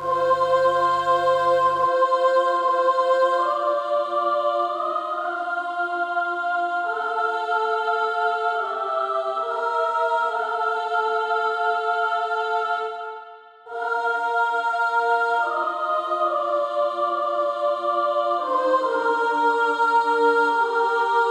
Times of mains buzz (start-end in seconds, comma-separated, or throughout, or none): 0.00-1.87